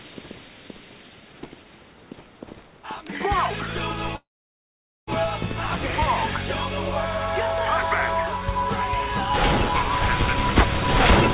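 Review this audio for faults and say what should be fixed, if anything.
From 4.16 to 5.09 s the last sound hangs on as a brief fading buzz, then about 0.83 s of silence, and the audio resumes exactly where it stopped, shifted about 0.91 s later with nothing lost. This call audio freeze likely comes from delayed packets emptying the jitter buffer. A steadier network route or a larger adaptive jitter buffer would prevent it.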